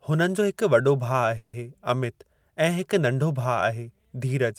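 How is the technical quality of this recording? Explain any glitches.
The speech has one glitch, a call audio freeze from 1.37 to 1.55 s, just before "अमित ऐं हिकु नंढो". For about 160 ms the last sound is stretched into a fading buzz, likely because delayed packets emptied the jitter buffer. Speech then resumes where it stopped, with nothing lost, but everything after runs 160 ms late.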